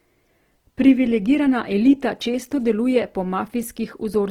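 From start to end, the speech sounds rough and grainy, turning noisy rather than thinning into holes, and the damage is plainly audible throughout. This is likely Opus compression in its music (CELT) mode: the encoder keeps each band's energy but fills starved bands with folded or noise-like content, which fits a low bitrate around 16 kbps. Bandwidth stays full, reaching about 20.2 kHz.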